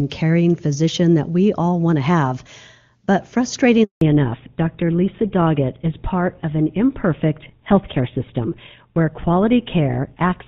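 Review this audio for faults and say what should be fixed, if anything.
A handover gap silences the speech from 3.83 to 4.01 s. No frames arrived for about 180 ms while the call switched networks. From 4.01 s to the end there is a fallback to narrowband. Nothing above 4 kHz remains, so the speech turns dull and rough. The loss of bandwidth points to an older codec such as GSM full rate, replacing the clean HD Voice heard before. Keep the call on a network that supports HD Voice, and use make-before-break handover so no frames are lost during the switch.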